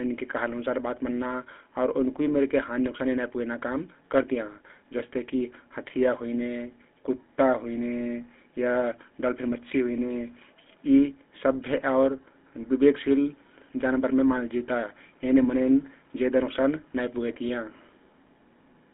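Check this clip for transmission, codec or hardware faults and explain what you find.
One fault runs through the whole clip: GSM full-rate codec coding. The speech carries a plainly audible buzzy, gravelly roughness, and everything sits between about 200 Hz and 3.5 kHz. The codec models the vocal tract and excites it with a sparse, evenly spaced pulse train, so voiced sounds come out grainy rather than smooth, which fits a 13 kbps stream. Simple telephone band-limiting would sound muffled but clean. This added rasp sets it apart.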